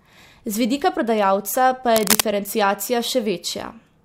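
From 1.96 to 2.21 s, cable scratch noise rasps over the speech at roughly the same loudness, likely from a worn cable or connector being moved so its contact resistance jumps about. Unlike a single click or steady hiss, it is a dense, uneven scratching burst.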